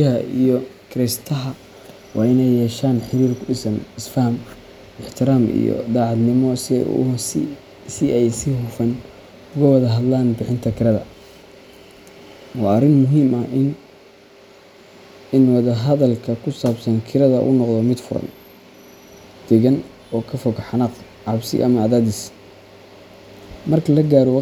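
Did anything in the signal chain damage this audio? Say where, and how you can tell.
No, nothing along the chain seems to have damaged this speech recording, and there's nothing here to track down.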